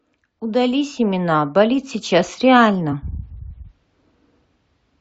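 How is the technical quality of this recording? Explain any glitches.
There is one glitch in this speech recording. From 2.91 to 2.94 s there is damaged data in the compressed stream. The decoder misreads the corrupted frames there and loses sync until it finds a valid frame header. The result is a short chirp, squawk, click or brief hole in the sound.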